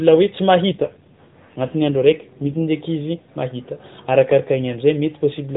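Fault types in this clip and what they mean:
AMR rate drop: From about 0.72 s to 2.67 s the speech turns rougher, buzzier and more synthetic, then clears when the rate climbs back. This fits the mobile codec stepping down from 12.2 kbps to 5.9 kbps and spending the freed bits on error protection. Unlike packet loss, nothing drops out. Unlike a bandwidth switch, the band stays the same narrowband telephone width throughout. Only the texture of the speech worsens.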